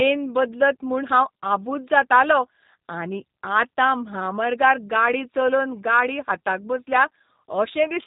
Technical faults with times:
0.00-8.06 G.729 codec

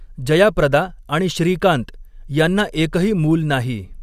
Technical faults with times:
none

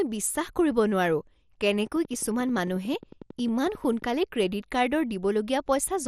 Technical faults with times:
0.00-6.08 MP2 compression
1.87-4.03 train of clicks

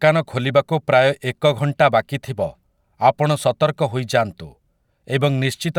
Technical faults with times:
none

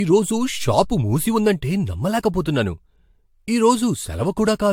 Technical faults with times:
0.00-4.73 generation loss

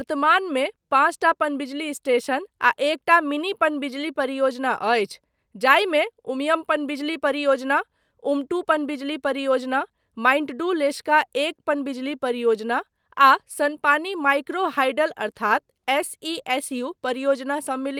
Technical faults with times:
none

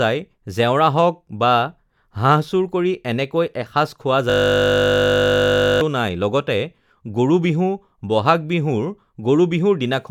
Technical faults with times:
4.30-5.81 system hang loop

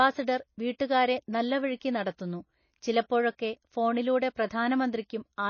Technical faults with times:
0.00-5.49 MP3 compression

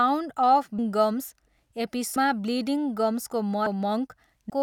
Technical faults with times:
0.78 compressed frames skipped
2.16 compressed frames skipped
3.66 compressed frames skipped
4.49 compressed frames skipped

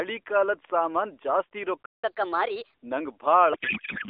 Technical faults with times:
1.86-2.04 playback stall
2.04-2.74 catch-up at higher speed
3.54-4.10 codec payload misread

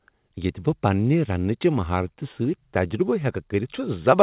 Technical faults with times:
none

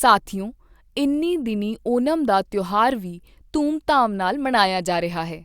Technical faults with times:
none

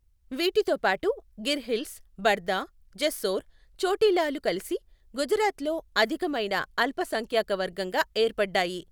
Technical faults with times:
none

